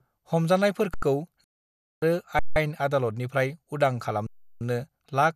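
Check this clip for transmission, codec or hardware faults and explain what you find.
Two kinds of fault are present: three underruns with a held sample and one digital broadcast dropout.

Underrun with held sample, at 0.94 to 1.02 s, 2.39 to 2.56 s and 4.27 to 4.61 s. The output buffer ran dry and the converter held its last value until data arrived again. The speech stops abruptly on a flat level with almost no click, for about 85, 170 and 340 ms. Each gap doubles the last, which fits buffers of 4096, 8192 and 16,384 samples. Nothing is skipped: the speech resumes where it halted, so each restart is soft rather than a sharp click.

Digital broadcast dropout, at 1.44 to 2.02 s. The receiver lost the digital stream, or frames failed their checks, and it muted until valid frames returned. The speech cuts to silence for 576 ms, which points to a run of roughly two dozen lost frames. Unlike the underruns, the material sent during that time is gone, so the speech comes back further along than where it broke off.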